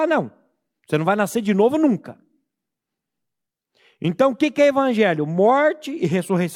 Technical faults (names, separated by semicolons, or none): none